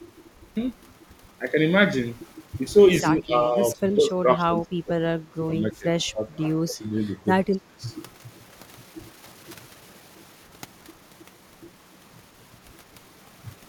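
In this speech clip, an echo canceller likely clamped down during double talk, causing speech suppressed in double talk: the voice dips by up to around 25 dB at 3.03–5.31, 5.59–5.86, 6.1–6.29, 6.66–6.98 and 7.45–7.83 s.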